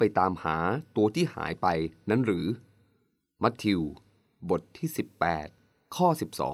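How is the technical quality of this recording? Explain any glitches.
No glitches or technical faults can be heard here.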